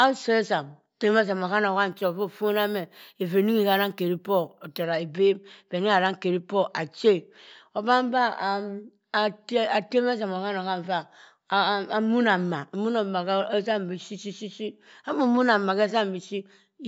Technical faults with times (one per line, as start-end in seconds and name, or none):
1.91-4.84 imaging from sample-and-hold upsampling